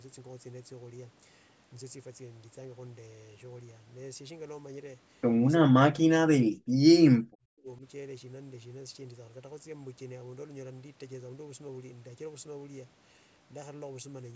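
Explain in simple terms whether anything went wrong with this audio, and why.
Speech drops almost to silence from 5.92 to 6.89 s and from 7.21 to 7.83 s, likely speech suppressed in double talk: the echo canceller turned everything down.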